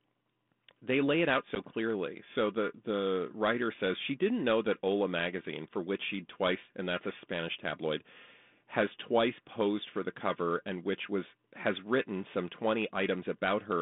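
Speech carried over a G.726 ADPCM line at 32 kbit/s, band-limited to about 200 Hz to 3.6 kHz, with packet loss on an ADPCM call from 1.55 to 1.57 s. Roughly one packet's worth of audio drops to hard silence, seen as a flat gap in the waveform and a blank vertical strip on the spectrogram. The sound then resumes slightly distorted while the decoder's adaptive predictor and step size resynchronise with the sender's.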